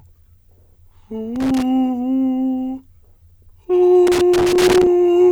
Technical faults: loose connector crackle

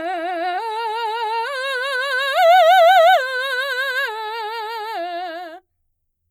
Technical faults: none

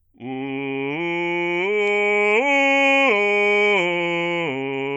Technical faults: none

